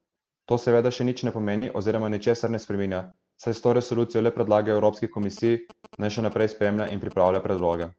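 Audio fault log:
1.57–1.63 s and 3.11–3.15 s, short concealed packet loss: In the first, right after "seveda še nič ne" and before "oziroma ničesar ne spreminja", about 40 ms of audio never arrived. In the second, about 20 ms went missing. The decoder covered each hole by extending the preceding sound, so it smears or wobbles briefly before rejoining. Unlike error-corrected frames, it invents sound rather than playing a degraded copy.
1.61–1.71 s, 3.07–3.09 s, 4.73 s and 6.75–6.85 s, lost packet rebuilt from error correction: Packets went missing, three at 1.61 and 6.75 s, covering about 60 ms each time, and singly at 3.07 and 4.73 s, covering about 20 ms each. Opus in-band FEC replayed low-bitrate copies carried in the following packets, so nothing drops out. Instead those moments turn grainy and noisier for a few hundredths of a second. The first of these overlaps the end of the concealed gap at 1.6 s.
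5.23–7.83 s, GSM signalling bursts: A nearby 2G phone sending signalling traffic was picked up and rectified by the audio circuitry. It produces a galloping dit-dit-dit of short buzzes at about 217 Hz, around 20 dB below the speech. Its fixed buzz pitch and rhythmic grouping, which are independent of the speech, set it apart from codec roughness. The Opus call path limits the audio to about 8 kHz and runs at 24 kbps.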